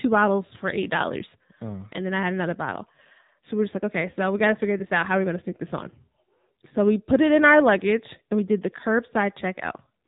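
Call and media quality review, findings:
AMR narrowband mobile codec, whole clip. Speech band-limited, nothing above 4 kHz. Dull, muffled top end. Plainly audible coding damage: synthetic, buzzy texture on the voice. Probable component: mobile leg of the call path, AMR-NB. Mechanism: 8 kHz sampling plus a vocal-tract model fed by sparse pulses per 5 ms subframe. Artefact level fits a low mode around 7.4 kbps.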